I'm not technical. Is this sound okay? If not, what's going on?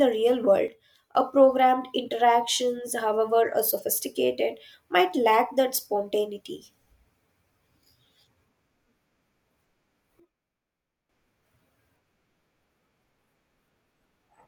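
No. At 0.68 s, just after "real world", and again at 10.2 s, the speech and background abruptly drop quieter together, likely a sudden gain jump from an unramped level change.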